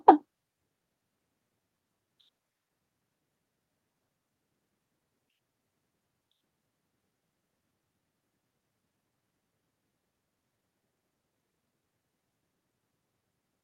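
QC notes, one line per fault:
No faults heard.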